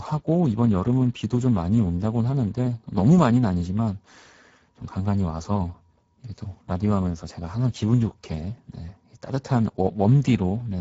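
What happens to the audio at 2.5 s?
At 2.5 s you're hearing Speex codec damage, present throughout: a low-bitrate CELP coder, likely around 10 kbps, leaving the speech hoarse and noisy, with nothing above 7.7 kHz.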